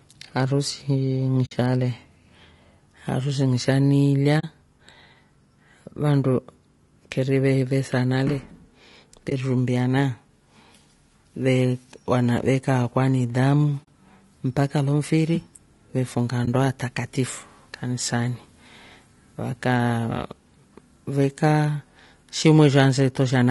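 Short frames in the encoder, likely low-delay AAC compression (AAC-ELD) at a rate consistent with about 32 kbps, resolve the pitch harmonics poorly throughout. The speech sounds plainly rough and grainy, with noise filling the gaps between harmonics and a thinned, artificial upper band.

AAC frame loss with muting occurs at 1.45 s (60 ms), 4.39 s (40 ms), 9.29 s (20 ms), 13.83 s (40 ms) and 16.45 s (20 ms). The decoder zeroes each missing stretch, and the overlapping windows fade the speech out and back in. This leaves brief dips where a single frame was lost and soft-edged silent holes where several were.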